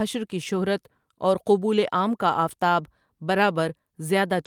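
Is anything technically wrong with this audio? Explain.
No, nothing is technically wrong with this audio.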